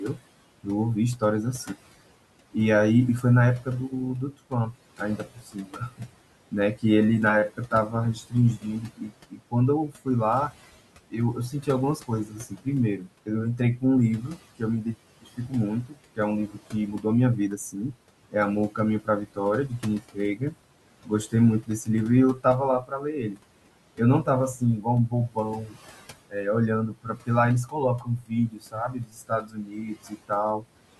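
Speech recorded over room noise about 19 dB below the voice. Noise suppressor artifacts run throughout. The suppressor pulls the background down by about 18 dB, so it sinks between phrases and rises under the speech. Speech cut by the noise suppressor occurs in seven stretches: 0.14–1.7, 3.22–6.84, 7.5–10.54, 11.11–17.05, 17.58–23.39, 23.96–25.76 and 26.93–30.65 s. The suppressor mistakes quiet parts of the speech for noise and turns them down with the background. They drop by up to about 19 dB and sound swallowed. The affected portions add up to anywhere from a fraction of a second to about a second and a half per stretch.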